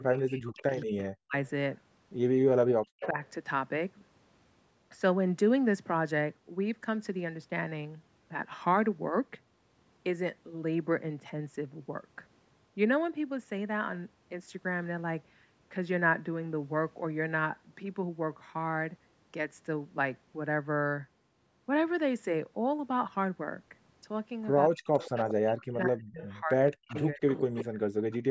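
From 0.00 to 1.35 s, speech suppressed in double talk likely occurs because the echo canceller cannot separate the near talker from loudspeaker echo, so it ducks both. The speech dips by up to about 40 dB in patches totalling around a second. Within that, from 0.47 to 0.86 s, an echo leak likely occurs because the canceller leaves loudspeaker pickup behind. A faint delayed copy of the speech returns 179 ms later, at about 25 dB below the speech.

From 2.79 to 3.17 s, the same double-talk suppression likely clamps the speech again, cutting it by up to about 40 dB for roughly a third of a second. From 3.01 to 3.07 s, a brief, likely leak lets a louder 179 ms echo scrap through at about 10 dB below the speech.

From 24.68 to 24.85 s, a short, likely suppression chops the speech. Then from 24.93 to 25.34 s, echo likely leaks through again, returning a 179 ms copy at about 10 dB down.

From 25.46 s to the end, the canceller likely keeps suppressing during double talk, with dropouts of up to about 40 dB over roughly two seconds. 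From 26.27 to 28.16 s, a likely leak overlays a faint 179 ms echo at about 25 dB below the speech. Throughout, the call's microphone path passes nothing above 8 kHz.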